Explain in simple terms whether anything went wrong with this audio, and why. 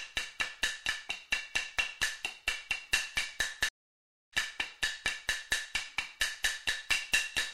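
At 3.69 s the sound cuts out completely for about 0.63 s, and when it returns at 4.34 s it has skipped ahead, with a little under half a second of material missing. This is a stream reconnect: the connection dropped, the player fell silent while it reconnected, then started decoding again from wherever the live stream had reached, so the part sent during the gap was never heard.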